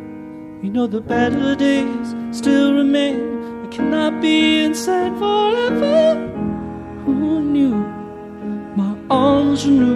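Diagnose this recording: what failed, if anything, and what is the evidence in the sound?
No dropouts, clipping, glitches or other failures can be heard anywhere in the recording, so nothing points to a fault at any stage of the chain.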